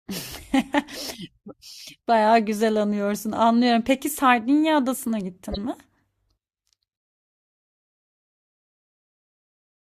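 At 5.48 to 5.58 s a corrupt frame decoded: damaged bits across several frames misplace energy, giving a fairly loud chirp, squeak, blip or burst of noise, seen as a short patch of misplaced energy on the spectrogram.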